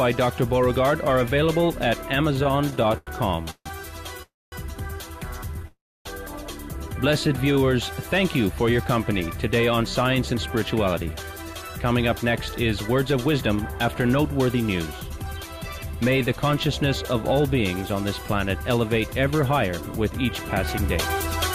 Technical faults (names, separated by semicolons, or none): repeated stalls (stutter); call audio freeze; jitter buffer slow-down; jitter buffer speed-up